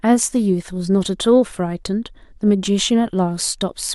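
A short speech recording with nothing technically wrong with it.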